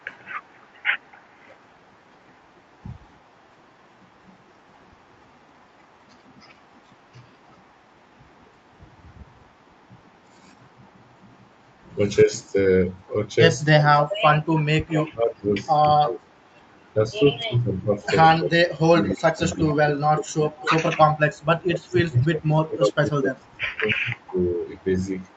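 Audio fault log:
0.0–9.56, 14.01–14.49, 15.82–17.11, 19.04–20.7, 22.15–22.25 and 23.4–25.36 s, echo leak: a copy of the speech trails the original by about 281 ms. It's barely there at the start and end, and loudest near 14.0 s, almost level with the talker. It's likely a loudspeaker echo the far-end canceller didn't fully remove.
12.24–12.57 and 13.74–24.61 s, speech suppressed in double talk: the talker dips about 10 dB at first, then in the long stretch keeps dropping by up to about 30 dB in pieces, roughly 5 s in all. It's likely the echo canceller ducking both sides while they overlap.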